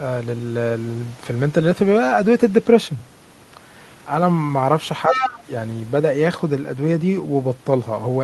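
From 5.08 to 5.5 s the talker's speech is suppressed in double talk: the level sinks by around 10 dB in uneven dips, totalling roughly a third of a second. The likely cause is an echo canceller that, hearing both sides at once, could not tell the local voice from loudspeaker echo and pulled everything down. Unlike a network dropout, the sound dips rather than vanishing, and it tracks the overlap rather than falling at random.

Overlapping this, from 5.11 to 5.39 s, the other side's voice is leaking through, sitting only about 5 dB below the talker's speech. This is likely residual loudspeaker echo the canceller failed to remove from the microphone. It differs from crosstalk or a second person in the room in that it is the far side replayed through a speaker and picked up again.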